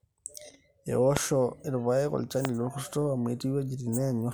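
At 1.17 to 1.19 s and again at 2.45 to 2.47 s, a single loud pop cuts sharply through the speech, each one some 20 dB above the level of the talking, with the speech continuing underneath. Each is a brief electrical pulse riding on the signal, likely from a plug, switch, static discharge or driver glitch, shaped by the downstream circuitry into a short, hard thump.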